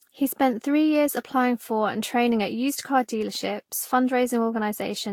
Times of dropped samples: 2.06, 3.37

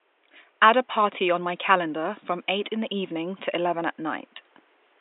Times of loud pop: none

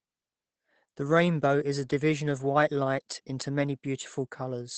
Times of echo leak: none

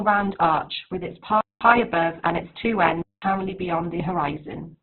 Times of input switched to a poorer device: 1.41-3.22

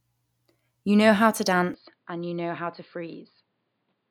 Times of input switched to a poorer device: 1.74-4.10

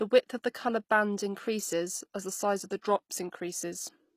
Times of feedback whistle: none

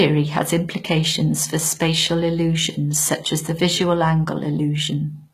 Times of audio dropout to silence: none

